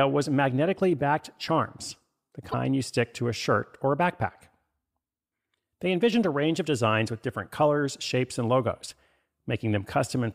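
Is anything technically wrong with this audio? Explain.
Yes. The speech has one brief fault, from 2.51 to 2.54 s. It is damaged data in a compressed stream. A short stretch of the encoded file was corrupted. Its bytes were lost, zeroed or overwritten. The decoder could not read the frames there correctly. It lost its place in the stream and had to hunt for the next valid frame header before decoding resumed. The result is a chirp, squawk, click or short hole lasting only a few hundredths of a second.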